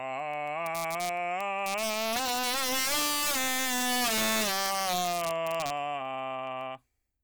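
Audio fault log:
throughout: integer overflow. The music is driven about 11 dB past full scale, and a small share of samples, around one in fifteen, wraps to the opposite extreme instead of being limited, giving violent cracks on loud passages, far harsher than clipping's flattened, buzzy distortion.
0.20–7.17 s: word clock ticks. Roughly fifty single-sample ticks at a steady rate of about one every 0.15 s, uneven in strength, fitting a receiver free-running roughly 150 ppm off the sender's clock. The regular spacing separates them from random dropouts or crackle.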